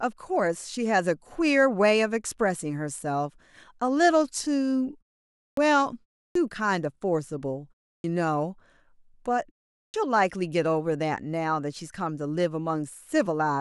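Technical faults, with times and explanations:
5.50 s, 6.27 s, 7.97 s and 9.86 s: clipped start after a pause. After silences of 0.3 to 0.56 s, the speech resumes abruptly with its opening 70 to 83 ms missing, because the output device sleeps during the gap and needs that long to wake and lock again before it can play. Unlike muted pauses, where only the background drops out and every sound survives, here the onset of the returning speech is actually lost.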